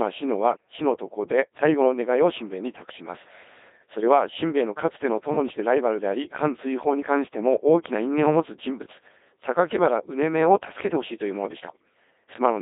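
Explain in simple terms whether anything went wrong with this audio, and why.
The whole clip has been squeezed through a Codec 2 vocoder, a low-rate digital-radio codec. It throws the real waveform away and rebuilds the speech from simple tones, so it sounds heavily robotic and buzzy, with nothing left above about 3.8 kHz.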